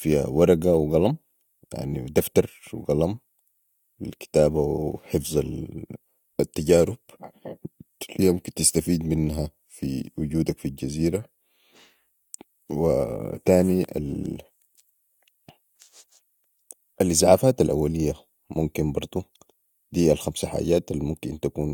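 Nothing technically wrong turns up anywhere in this stretch of recorded speech, so there's no fault to point to or explain.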